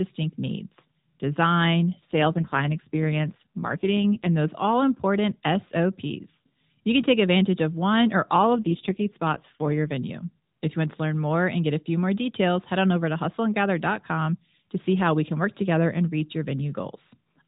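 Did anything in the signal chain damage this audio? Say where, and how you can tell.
Yes. AMR rate drop in the network-controlled codec: from 2.12 to 4.35 s, after "needs design" until "those all important", and from 8.34 to 9.92 s, after "advantage of one or", the speech turns buzzier and more synthetic, which fits a fall from 12.2 to 5.9 kbps. Unlike packet loss, there is no gap and the narrow band does not change.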